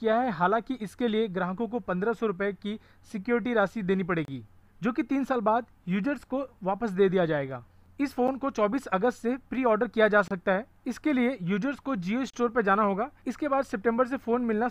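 The audio breaks into short silent holes with hard edges at 4.25–4.28 s, 8.28 s, 10.28–10.31 s and 12.30–12.34 s. These are gaps between stream segments, spaced on a 2-second segment grid. Timestamps leave 8 to 32 ms uncovered, so the player inserts silence. Nothing is lost.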